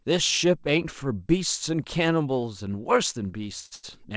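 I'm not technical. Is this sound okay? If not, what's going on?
No. Near the end there are two short stalls from a late packet, at 3.66 to 3.73 s and 3.75 to 3.85 s. Sound arrived late, so the receiver briefly stretched the last bit, making it sound held or slightly buzzy. Nothing is lost.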